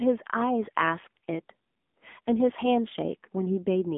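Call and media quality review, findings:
AMR narrowband mobile codec, throughout. Speech band limited to about 200 Hz to 3.5 kHz, nothing above 3.7 kHz. Plainly audible buzzy, synthetic texture from 20 ms frame vocal-tract modelling; consistent with a low AMR-NB mode near 7.95 kbps.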